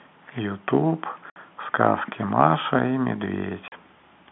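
Packet loss filled with silence at 1.30 s and 3.68 s cuts 60 ms and 40 ms holes in this telephone-band speech, which fits lost 20 ms packets replaced by silence.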